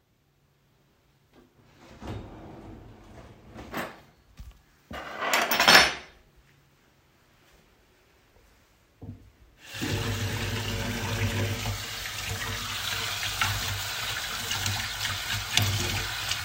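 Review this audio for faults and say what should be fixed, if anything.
No faults; nothing needs fixing.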